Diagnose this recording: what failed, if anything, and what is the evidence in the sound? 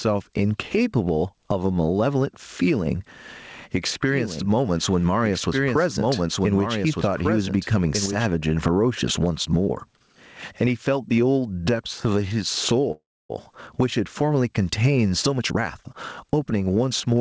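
Gain pumping runs through the whole recording. The gain swings by about 15 dB. Loud and soft passages sit too close in level. The stage is call processing: the input gain is likely set far too high, and a fast limiter keeps clamping it.

A doubled audio track appears from 4.09 to 8.27 s. A full-band copy trails the speech by roughly one and a half seconds, about 5 dB quieter. It has no reverb tail. It starts and stops abruptly. The likely cause is a second, slower capture path mixed in with the first.

A call audio freeze occurs from 12.92 to 13.31 s. The last sound is stretched into a fading buzz or hiss, then about 280 ms of silence. The speech resumes where it stopped, with nothing lost. Network packets were likely delayed, draining the jitter buffer and adding 375 ms of delay.

A jitter buffer speed-up runs from 15.39 to 17.16 s. The speech plays at 113 percent speed with unchanged pitch and sounds hurried. 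The receiver cut short pitch-period slices, roughly 0.2 s in total, to shrink excess buffered delay.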